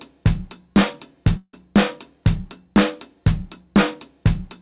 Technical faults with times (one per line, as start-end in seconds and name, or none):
1.37-1.54 long network dropout